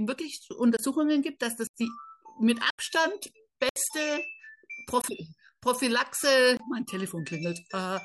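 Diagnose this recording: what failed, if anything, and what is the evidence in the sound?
The playback buffer underran. Blocks of digital silence cut the speech at 0.77, 1.67, 2.70, 3.69, 5.02 and 6.57 s. Three last 23 ms, which fits a 1024-sample buffer. The others last 70 to 84 ms. The buffer went unfilled, so zeros played.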